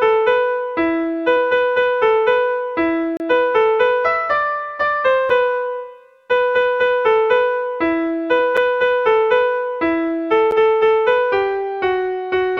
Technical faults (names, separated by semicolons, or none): block of digital silence